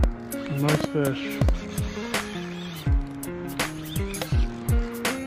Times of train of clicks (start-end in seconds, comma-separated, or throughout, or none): 0.04-1.50